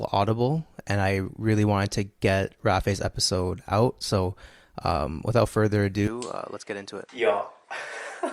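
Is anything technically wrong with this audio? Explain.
Yes. From 6.08 s, just after "um without further", there is an input switched to a poorer device, likely. The new path passes nothing above 10.6 kHz, so the speech turns duller at once, with no gap. It drops a little in level and gains a faint new hiss.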